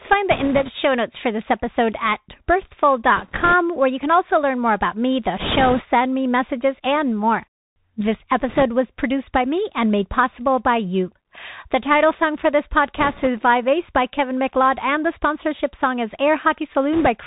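Bluetooth CVSD headset codec damage runs throughout this speech clip and is plainly audible. The sound fits the 64 kbps CVSD link used by headsets: each sample is coded as a single up-or-down step whose size keeps adapting, and nothing above 4 kHz survives. The speech is narrow and boxy, a granular hiss sits underneath it, s sounds come out scratchy, and loud bright moments distort where the adaptive step can't keep pace with the waveform. Bit errors on a Bluetooth voice link occur at 0.31–0.71 s (just before "show notes for this"), 3.17–3.53 s, 5.40–5.82 s (between "more about me the" and "me messages and more"), 8.48–8.63 s (before "was produced by me"), 12.97–13.28 s and 16.93–17.08 s, each at an error rate of a few percent. Because every CVSD bit nudges the signal by only one small step and the errors fade out quickly, these bursts produce no sharp clicks. They lay a rushing, crackly noise over the speech, and it is heaviest around 5.4 s, where the error rate is highest.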